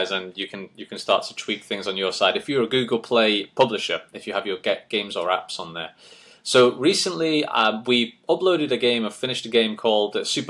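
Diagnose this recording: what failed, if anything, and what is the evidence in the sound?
No fault found in any stage.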